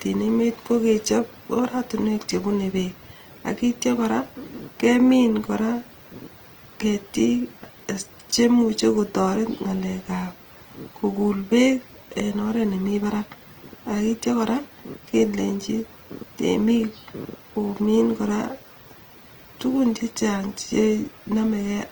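All the way through, the speech has a grainy, rough texture with noisy fill where detail should be, likely from Opus compression at a low bitrate, around 24 kbps.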